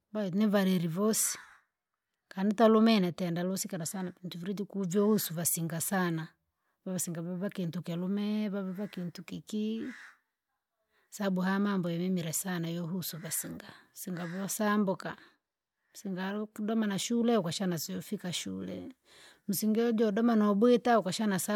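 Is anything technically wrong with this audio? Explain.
No, nothing technically wrong turns up anywhere in this speech recording; it all sounds just as it should.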